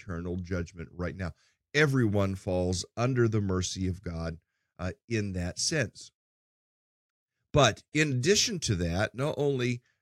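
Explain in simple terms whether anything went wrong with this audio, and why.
Nothing went wrong with this speech recording that a listener can pick out. At no point does anything in the sound break, jump or change in a way that would point to a technical problem.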